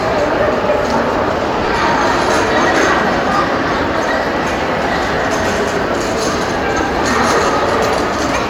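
At 1.66, 3.37, 5.15 and 7.47 s there are lost LE Audio frames, each gap about 20 ms, which fits two 10 ms frames. The LC3 decoder fills each hole by replaying the last spectrum with scrambled signs, so you hear a brief noisy smear instead of the real sound.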